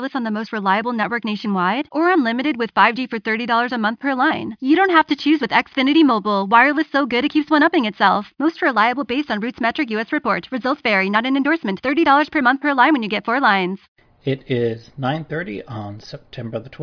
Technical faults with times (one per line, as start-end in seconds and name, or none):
none